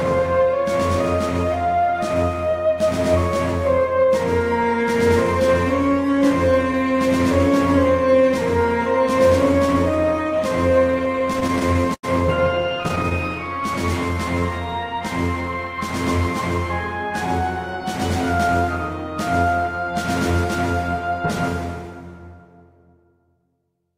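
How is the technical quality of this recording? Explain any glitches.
The recording has one recurring problem: repeated stalls (stutter) in two bursts, from 10.79 to 12.05 s and again from 12.55 to 13.13 s. The first burst has 17 short breaks, the longest about 90 ms, with roughly a fifth of that stretch concealed. The second has 9 briefer breaks, none over 12 ms. Packets reached the receiver late or too slowly, so its jitter buffer kept running dry. Each time, it stretched the last sound, fading it in the longer waits, until fresh data arrived. Nothing is actually lost, but the sound drags and stutters through both bursts.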